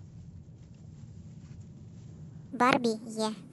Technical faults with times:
2.52-3.52 section at the wrong speed

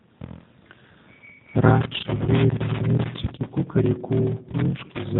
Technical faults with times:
0.00-5.19 block size mismatch (padded)
0.00-5.19 G.729 codec
2.25-2.28 VoIP packet loss concealed by the speech codec

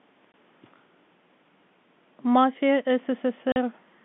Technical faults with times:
0.32-0.34 packet loss filled with silence
3.52-3.56 packet loss filled with silence

